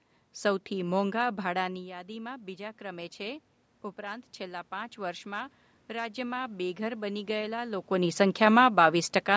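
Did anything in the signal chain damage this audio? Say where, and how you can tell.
Yes, the call processing's automatic gain rising from 1.60 to 7.84 s: the speech dropped about 13 dB, then the AGC pulled voice and room noise up together, about 8 dB.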